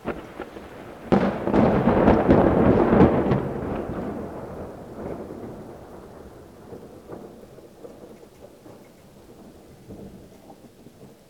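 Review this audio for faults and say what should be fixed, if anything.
Audio read two samples at a time (double speed) runs throughout: the sound plays twice as fast and an octave high, because pairs of samples are taken as one frame and alternate samples are dropped unfiltered. Unlike a plain sample-rate mismatch, strong content above a quarter of the sample rate folds back. To prevent it, match the reader's channel count and sample width to the file's actual format before decoding.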